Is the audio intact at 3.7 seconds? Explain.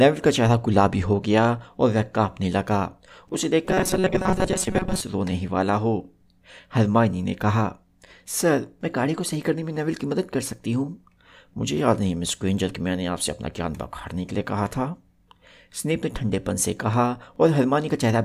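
No. From 3.65 to 5.01 s the audio is most likely starved of fresh data, so the playback keeps recycling the last few milliseconds, for most of the span, while the real sound is skipped. Looping a segment of roughly 5.3 ms stamps a fixed pitch of 188 Hz onto the speech. This is robotic sound from repeated short buffers: a stiff, metallic buzz that only loosely tracks the speech.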